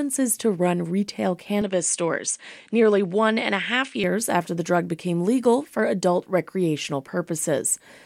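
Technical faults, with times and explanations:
1.62–4.04 s, input switched to a poorer device: recording likely moved to a narrower-band input, so speech loses everything above 9.8 kHz and gains faint new background noise, level unchanged.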